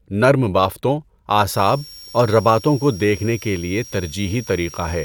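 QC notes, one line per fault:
1.49 s to end, switching supply whistle: just after "نرم بافتوں" a thin high whistle enters and stays to the end of the clip, sitting roughly 20 dB under the speech and wandering between 5.44 and 5.66 kHz as the converter's switching rate shifts with load. A supply dropping into an audible burst mode produces this. On a spectrogram it shows as a narrow, slightly wavering horizontal line near 5.5 kHz.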